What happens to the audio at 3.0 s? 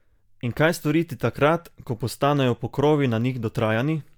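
At 3.0 s the speech continues intact, with no dropout, click, distortion or other fault at that moment.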